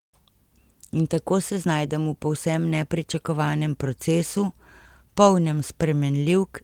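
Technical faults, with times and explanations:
No technical faults can be heard in this speech recording. Nothing in it calls for a time or an explanation.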